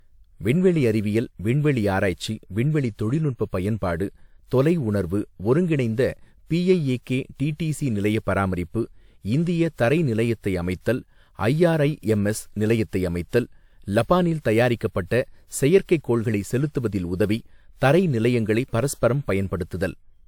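From start to finish the speech has a swirly, hollow quality, with smeared consonant attacks and a watery shimmer that is heavier than a single encode at this quality would leave, though content still reaches up to about 20 kHz. This is likely generation loss: repeated lossy re-encoding, pointing to roughly three passes through WMA at around 128 kbit/s. Each pass requantised on a shifted frame grid, so the artefacts compounded.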